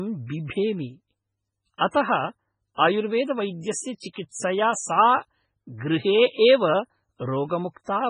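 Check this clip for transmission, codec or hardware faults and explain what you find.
Two codec faults are audible in this speech clip: heavy lossy-compression damage throughout and three brief pre-echoes.

Throughout, the speech sounds watery and swirly, with metallic chirping on s sounds, smeared consonant onsets, and no content above 10.4 kHz. The likely cause is MP3 compression at a very low bitrate, which fits something near 16 kbps. Short of bits, the encoder cuts the treble at a fixed point and drops weak frequency lines, which flicker on and off from frame to frame.

At 1.78 s, 3.98 s and 4.13 s, a short hiss leads into sharp onsets, lasting about 30 ms, 43 ms and 32 ms respectively, and those attacks sound soft and blurred. This is pre-echo. Each attack falls late in a transform block, and the quantisation noise the codec budgets for the loud part spreads evenly across the whole block, filling the quiet gap before the onset.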